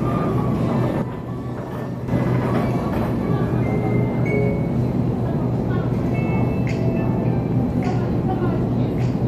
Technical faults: sudden gain jump

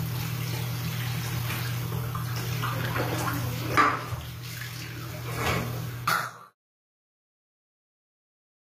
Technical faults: HE-AAC compression

